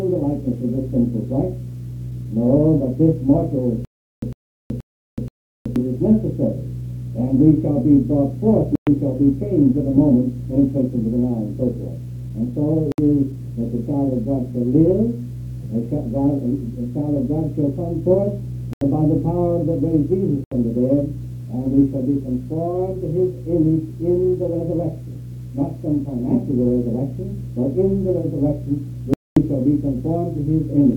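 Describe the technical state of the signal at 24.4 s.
At 24.4 s the signal is intact, with no audible fault at that moment.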